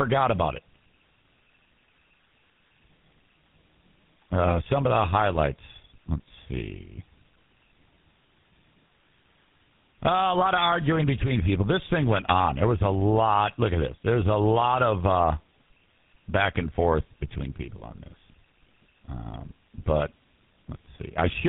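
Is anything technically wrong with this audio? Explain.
Yes. Tandem speech coding runs through the whole clip: the speech passed through GSM full rate at 13 kbit/s, was decoded to A-law G.711 at 64 kbit/s, then coded again by GSM full rate. The second GSM coder models errors the first already introduced, so the losses stack. The speech sounds rough, muffled and warbly. On a spectrogram, energy stops at about 3.8 kHz, and the harmonics look smeared and unsteady rather than cleanly striated.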